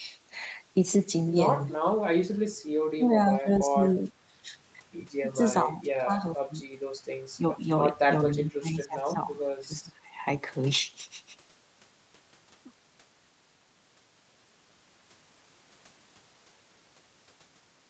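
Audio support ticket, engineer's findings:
Speech suppressed in double talk, 3.23–3.81, 4.08–4.49, 5.64–6.16, 6.35–6.64, 7.36–7.70, 8.27–9.32, 9.67–10.16 s. Near-end level dips by about 10 to 25 dB, deepest at 8.27–9.32 s. Likely echo canceller mistaking overlapping talk for echo and attenuating both.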